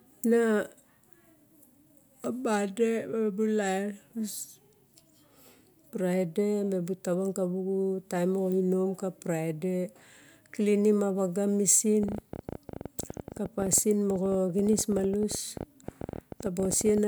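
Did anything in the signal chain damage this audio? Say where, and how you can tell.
Yes. From 12.03 s, just after "a xuga mesin", to 16.99 s, a train of clicks runs at about 14 per second with uneven spacing. Roughly 70 similar pulses peak about 5 dB above the speech, showing as narrow spikes on the waveform and thin broadband vertical lines on a spectrogram. Interference in the analogue wiring or a faulty connection or power supply is the likely cause.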